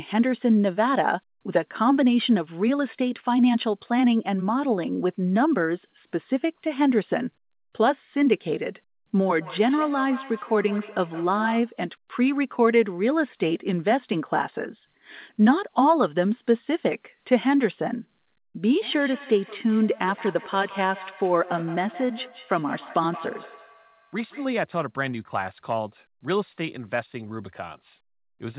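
From 9.41 to 11.78 s, and again from 18.81 to 24.6 s, the speech carries a feedback echo between two devices: a second device's loudspeaker is picked up by a nearby microphone, which the echo canceller can't remove. Each syllable returns roughly every 150 ms, peaking about 16 dB and then about 17 dB below the speech. On a spectrogram this shows as faint repeated copies trailing each syllable, and the waveform shows small evenly spaced bursts. Nothing appears above 4 kHz, which fits a G.711 A-law call path.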